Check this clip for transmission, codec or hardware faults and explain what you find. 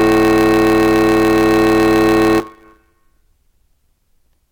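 The music has one fault, a block size mismatch (truncated), present for the whole clip. One stage hands over longer blocks than the next stage reads, so the tail of every block is discarded, which fits a 512-sample block being cut short. Those regular cuts produce a steady buzz at 100 Hz, and the music runs about 1.16 times fast. Unlike a sample-rate mismatch, the pitch stays near normal despite the faster tempo.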